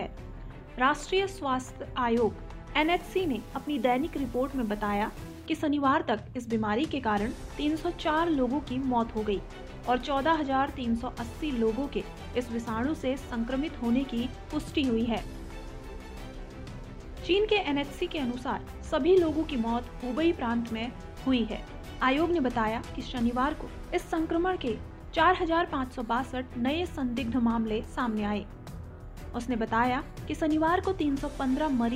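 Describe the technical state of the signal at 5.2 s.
At 5.2 s the sound is grainy and gritty, with distortion that follows the signal. This low bit depth without dither runs from 2.81 to 5.46 s. It likely comes from rounding to about 7 bits, leaving error roughly 30 dB down.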